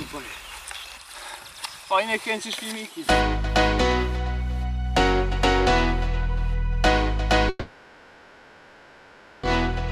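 From 7.49 s to 9.45 s, the audio drops out for about 1.94 s. This is likely a long network dropout, where no audio reached the receiver for that stretch. The receiver covers the whole gap by carrying the last sound forward as a buzz or hiss that fades away. At no point does it fall to full silence. When the audio resumes at 9.45 s, the missing 1.94 s is simply gone.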